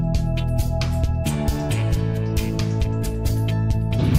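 No technical faults can be heard anywhere in the clip.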